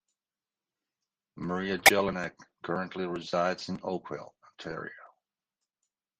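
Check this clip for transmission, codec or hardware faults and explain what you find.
The clip has one fault type: lost LE Audio frames, at three points in the speech. The first runs from 0.32 to 0.35 s and lasts 30 ms, which fits three 10 ms frames. The second, at 1.85 s, lasts 20 ms. The third, at 4.71 s, lasts 10 ms. At each gap the LC3 decoder concealed the missing data by repeating the last good spectrum with randomised signs. That turns the speech at those points into a brief, noisy, smeared blur rather than a clean dropout. The speech carries light LC3 coding throughout, likely at around 64 kbps.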